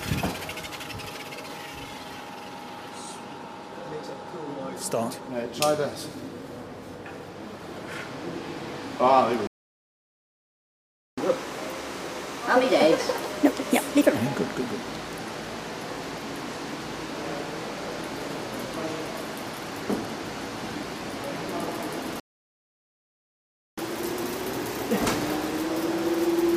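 At 9.47 s the sound cuts to silence mid-flow for about 1.7 s, resuming at 11.18 s: a playback stall, likely the player starving for data or its thread being blocked. From 11.18 to 14.18 s the audio runs 1.25 times fast and roughly four semitones sharp. This is catch-up at higher speed, where the player resamples its backlog to regain lost time before settling back to normal pitch. The pattern repeats: silence from 22.2 to 23.78 s, about 1.58 s, again likely a stalled player, then a milder catch-up at 1.15 times speed, roughly two semitones high, from 23.78 s to the end.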